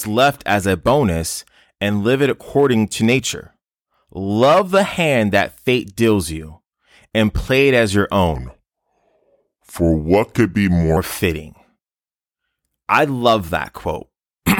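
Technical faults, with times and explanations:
8.35–10.97 s, section at the wrong speed: after "play it as your" speech turns deep and slow, about three semitones down at 0.824× speed, likely from a mismatched playback clock.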